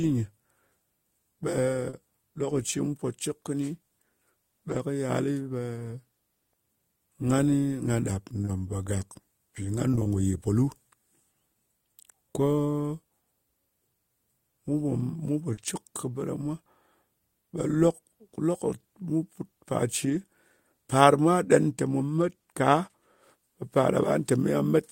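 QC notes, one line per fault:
1.89 s and 15.53 s: short concealed packet loss. A brief smear lasts about 40 ms. The second falls just after "mu pò mu po", before "cɨk kɨ bɨ ɗa". Audio never arrived in time, so the receiver extended the preceding sound across the hole and blended back.
4.69 s, 15.57 s, 20.05 s and 22.17 s: lost packet rebuilt from error correction. Rougher, noisier stretches last about 60 ms, and 40 ms at 22.17 s, which fits two or three lost 20 ms packets. The decoder played low-bitrate backup copies carried in the following packets, so nothing drops out, but those frames lose detail.
8.41 to 10.07 s: scattered short gaps. Roughly seven small ticks and hiccups, each around 20 ms or less, are spread across this stretch and add up to about 100 ms of patched audio. Separate packets went missing or arrived late, and each hole was filled by continuing the previous sound.
21.45 to 23.23 s: channel delay (comb filtering). 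A dulling of the very top end appears between "par mwa" and "ɓe par". One channel runs late by roughly a single sample, about 0.02 ms, which fits a one-sample offset. Summed to mono, the two channels cancel near 20 kHz.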